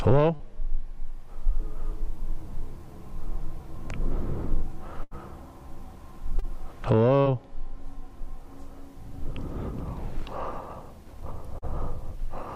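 At 0.35 s, short concealed packet loss: about 40 ms never arrived and was patched by extending the preceding sound. It is a brief smear, seen as a smoothed, repetitive patch on the spectrogram. At 5.03 to 5.14 s, a burst of packet loss drops about 80 ms. The filler decays into a held buzz or fading hiss, then the waveform resumes with that stretch missing. The same short concealment recurs at 6.39, 7.22 and 11.58 s, each a roughly 40 ms smear.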